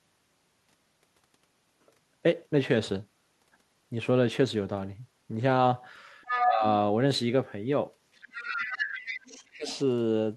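At 6.23 to 6.51 s the other side's voice leaks through, about as loud as the talker, most likely loudspeaker echo the canceller didn't fully remove. Right on top of it, from 6.44 to 6.64 s, you get speech suppressed in double talk. The talker dips by roughly 15 dB, likely because the canceller couldn't tell them from the echo and turned everything down.

A longer leak runs from 8.14 to 9.44 s, sitting about 10 dB under the talker. Within it, 8.41 to 8.93 s, the talker drops hard, around 25 dB down for half a second.

Then 9.53 to 9.68 s has another short suppression of about 20 dB. A faint scrap of the far side, roughly 20 dB down, follows at 9.68 to 9.77 s.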